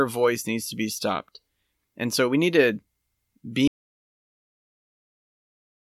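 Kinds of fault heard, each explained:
Audio dropout to silence: at 3.68 s the speech cuts off mid-flow, and the rest of the clip, right to the end, is silence with no room tone. The input was likely lost while the recorder kept writing silence.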